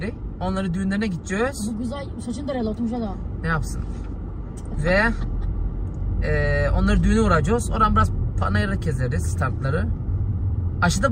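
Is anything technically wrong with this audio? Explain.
No, nothing is technically wrong with this audio. No part of the recording points to a problem in how it was captured, processed or delivered.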